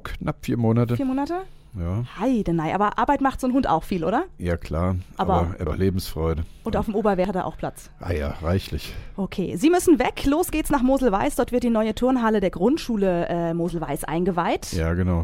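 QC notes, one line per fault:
5.67 s and 7.25 s: dropped buffer (overrun). The audio jumps ahead, losing roughly a third of a second, then a tenth, likely from samples overwritten before being read. The waveform shows a sudden join with no gap, and the spectrogram a thin broadband vertical line.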